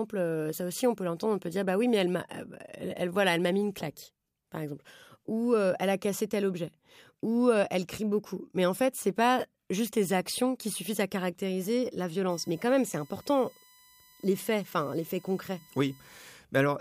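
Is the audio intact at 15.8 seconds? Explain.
No. At 15.8 s the speech carries USB whine, present from 12.30 to 16.29 s. Current drawn in 1 ms USB frames leaks through power or ground, producing a steady 1 kHz tone with harmonics, loudest at 4 kHz, roughly 30 dB below the speech.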